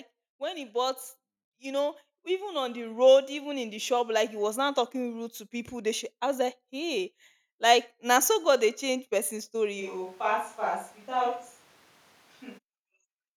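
From 1.59 to 3.96 s, just before "like he was now", automatic gain rising lifts voice and background together by about 8 dB, a gradual swell rather than a jump.

From 9.82 to 12.57 s, after "dey change person story", the speech abruptly turns hollow, roomy and thinner, roughly 5 dB quieter with more room noise, likely a switch to a distant microphone.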